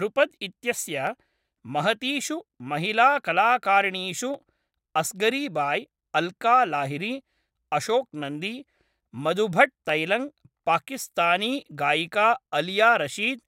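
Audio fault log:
1.07, 4.34, 7.9, 9.89 s, dropped samples: a single sharp click each time, a thin vertical line across the spectrum. The likely cause is a fraction of a millisecond of samples going missing, so the waveform leaps abruptly to a later value without removing any audible speech.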